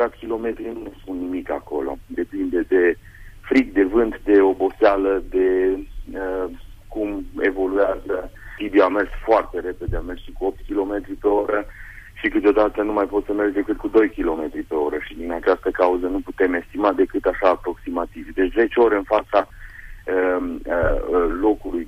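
No technical faults can be heard anywhere in the audio.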